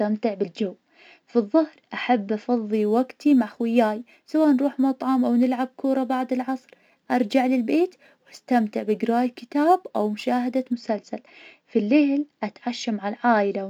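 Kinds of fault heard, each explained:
Crude rate conversion: From about 2.73 s to 10.73 s, just after "بالجو فالظهر أحب", the speech picks up a gritty, inharmonic fizz. The rate was raised by simply repeating nearby samples, with no smoothing filter. That fits a step from 44.1 kHz to 48 kHz, a ratio of about 1.09. The repeats fall in a fixed pattern, creating shifted, inharmonic copies of the voice. They sit roughly 35 dB below the speech and rise with loud, bright sounds.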